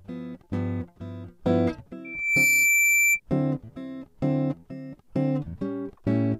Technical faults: loudspeaker feedback squeal

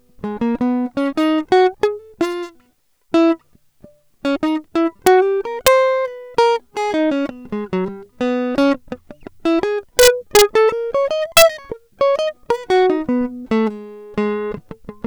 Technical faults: integer overflow

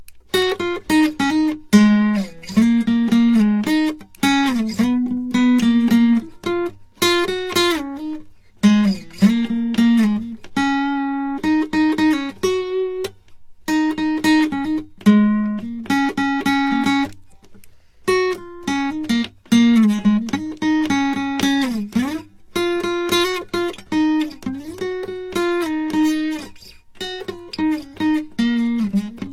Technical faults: transcoding between lossy codecs

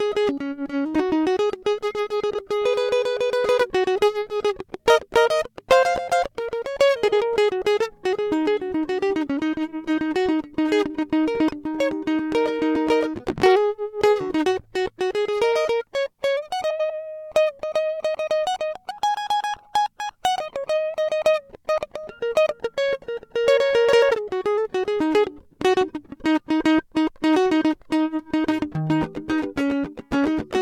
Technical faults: frames out of order

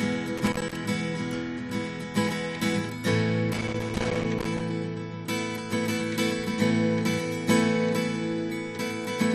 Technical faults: loose connector crackle

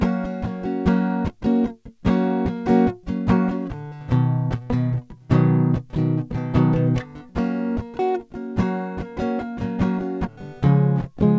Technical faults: none

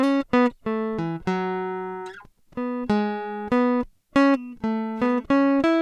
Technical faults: none

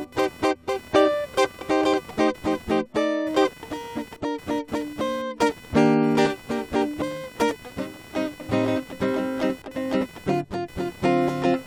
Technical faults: computer activity noise

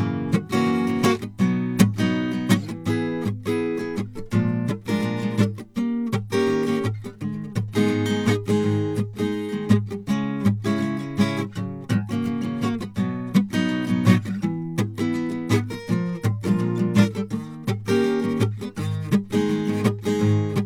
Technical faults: none

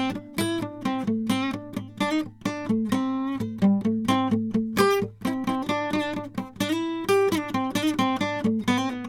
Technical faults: none

